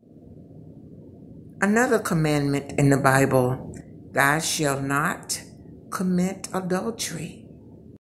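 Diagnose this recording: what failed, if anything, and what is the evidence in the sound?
A sudden gain jump lifts sound and background noise together by about 7 dB from 2.69 to 3.81 s, unlike a real loudness change. Likely cause: an unramped digital gain setting in the driver or call processing.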